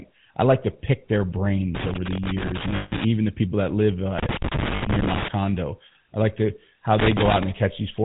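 A buzzy, gravelly roughness sits on the speech for the whole clip, with nothing above 4 kHz. This is the GSM full-rate codec, whose pulse-driven vocal-tract model, consistent with 13 kbps coding, leaves plainly audible damage.

From 2.76 to 2.93 s, just before "the people that live", and again from 4.76 to 4.83 s, the sound freezes into a rough, metallic ring. These are lost GSM frames: the decoder replays the last good frame with falling gain, for about 160 ms and then 60 ms.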